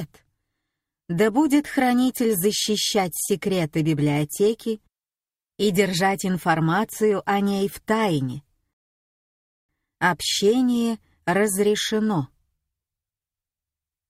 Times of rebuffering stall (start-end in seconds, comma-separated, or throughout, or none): 8.73-9.69